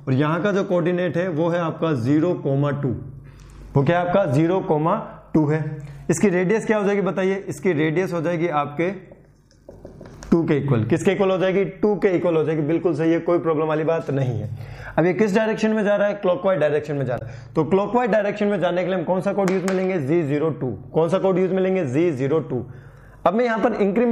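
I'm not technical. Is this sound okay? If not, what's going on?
No. There is damaged data in a compressed stream at about 17.15 to 17.22 s, heard as a short glitch lasting well under a tenth of a second. A small stretch of the compressed file is wrong, as if some bytes were lost or scrambled. The player can't make sense of that piece, loses its place, and hunts for the next clean starting point. That is the short glitch you hear in that gap.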